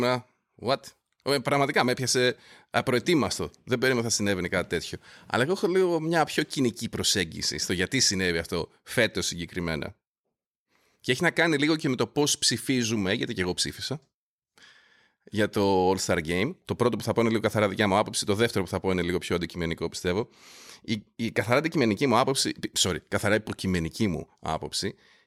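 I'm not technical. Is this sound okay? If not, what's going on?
Yes, nothing technically wrong can be heard anywhere in this recording.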